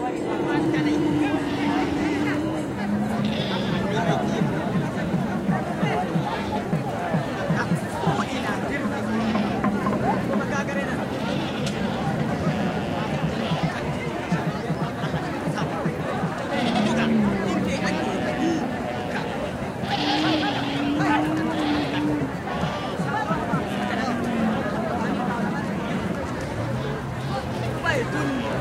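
Right at 0.66 s there's a tiny skip, and you get the same thing again at 6.65 s. That's overlap between stream segments: two chunks had time stamps that ran into each other, and the player trimmed the overlap even though the sound there wasn't actually doubled. A sliver of audio, about 13 ms the first time and 17 ms the second, just disappears, so the waveform jumps. The gap between the two skips fits a 6 s segment boundary.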